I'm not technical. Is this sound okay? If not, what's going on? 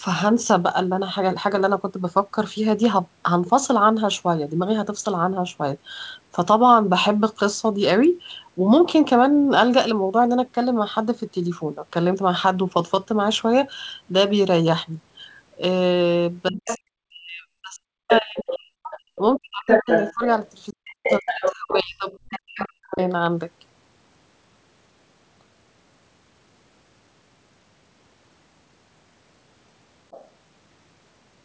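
No. From about 16.5 to 20.2 seconds, and again from 20.7 to 23.0 seconds, the main voice keeps sinking very low or dropping out in pieces. This is speech suppressed in double talk: both people likely spoke at once, and the call's echo canceller turned everything down.

A second voice also slips in at about 16.7, 18.1 to 18.6, 19.2 to 20.1, 20.9 to 21.6, 22.1 to 23.0 and 30.1 to 30.3 seconds. This is the other side's voice leaking through, likely because the echo canceller missed part of the loudspeaker sound reaching the microphone.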